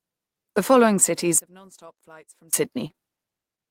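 From 1.38 to 2.53 s, just after "following cities", one stereo channel has likely been inverted, so summing to mono cancels the shared speech and drops the level by about 27 dB. Then come three back-to-back short concealed packet losses at 2.87, 2.92 and 2.96 s, each missing about 20 ms. The receiver patched each gap by extending the preceding sound, leaving a brief smeared wobble through 3.00 s.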